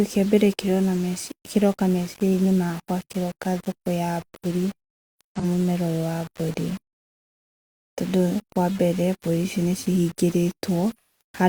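Low bit depth without dither runs through the whole clip: the speech carries a coarse, grainy distortion that moves with the voice, sitting around 20 dB below it, with quiet tails breaking up. It is likely caused by rounding to about 6 bits with no dither.

AAC frame loss with concealment occurs from 5.39 to 5.44 s and again from 10.93 to 11.21 s. The decoder patched missing audio from the previous spectrum, giving a brief smeared, phasey blur for about 43 ms, which fits a single lost frame. The later gap of about 171 ms, which fits four frames, lasts longer.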